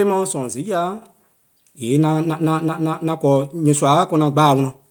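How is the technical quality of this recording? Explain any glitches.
The recording has one glitch. At 1.02 s the whole speech signal, voice and background noise alike, jumps abruptly louder by about 7 dB and stays there. This is a microphone volume stepped up event: the call software judged the input too quiet and raised the device's input gain in a single step.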